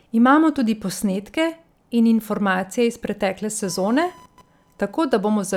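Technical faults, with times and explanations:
3.64 to 5.57 s, computer activity noise. A faint chirping buzz near 1 kHz, well under the speech, runs to the end. Shifting computer load disturbs the shared audio ground.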